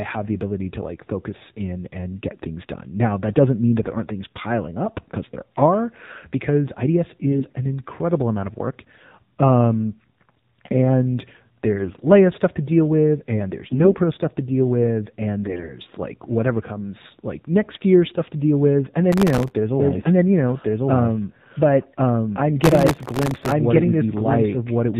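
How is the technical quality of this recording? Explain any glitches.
The recording has poor technical quality, with four kinds of fault.

The AMR narrowband mobile codec compresses the whole speech clip at a low rate, consistent with about 7.4 kbps. Nothing above 4 kHz survives, so the voice sounds muffled, buzzy and synthetic.

AMR bit errors occur at 7.32–7.53 s, 11.76–12.07 s, 13.62–13.97 s (after "to deal with and"), 15.44–15.80 s, 17.70–17.79 s and 19.92–20.11 s. Flipped bits misplace the codec's excitation pulses, so the voice turns hoarse, scratchy and gargly while keeping its pitch.

Processor overload crackle occurs at 19.13–19.51 s and 22.62–23.52 s. Sub-millisecond buffers repeatedly miss their deadlines and replay stale audio, producing gritty tearing crackle over the voice.

A doubled audio track starts at 19.80 s, after "there's a", and runs to the end. It is likely caused by a second, slower capture path. 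A full-band copy about as loud as the original trails by roughly a second, with no reverb, so the speech overlaps itself.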